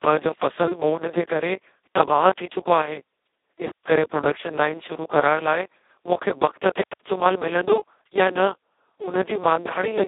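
Speech heard through the Speex codec for its whole length, with heavy damage: the voice sounds hoarse, buzzy and close to robotic, which fits Speex at its lowest setting, around 2 kbps, where the excitation is barely coded. The audio sits in a telephone band of roughly 300 Hz to 3.7 kHz. On a spectrogram, energy stops at a flat ceiling near 3.8 kHz with nothing above it, and the harmonics are smeared into grainy, noise-like texture.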